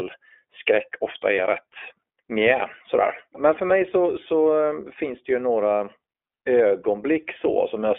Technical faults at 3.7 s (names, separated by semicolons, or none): iLBC codec; lost iLBC frames